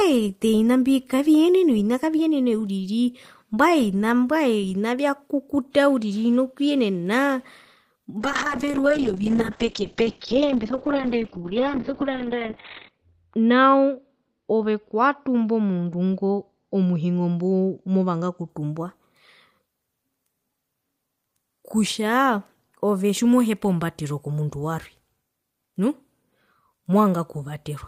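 From 8.21 s to 18.55 s a call bitrate drop starves the encoder, which fits a fall from about 32 kbps to 6 kbps. The speech turns coarse and watery, and bandwidth shrinks from 20 kHz to 4 kHz, sounding muffled for the worst 4.68 s.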